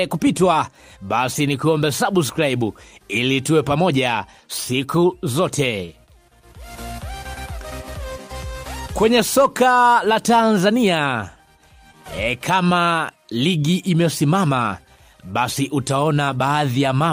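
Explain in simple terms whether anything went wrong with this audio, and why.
A short stall from a late packet happens at about 5.85 to 5.90 s. One piece of the audio arrived late, so the player held the last sound for about 24 ms while waiting, then carried on from the same point. Nothing is lost, but that moment drags slightly.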